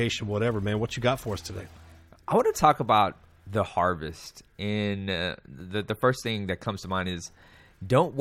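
No technical faults can be heard anywhere in the recording. Nothing in the sound needs a timestamp or further comment.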